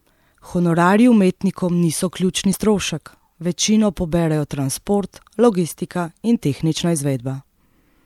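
Speech clip with damaged data in a compressed stream at 2.50–2.54 s, after "umetnikom niso": corrupt frames desync the decoder, producing a brief glitch before "strošek večino poberejo transport".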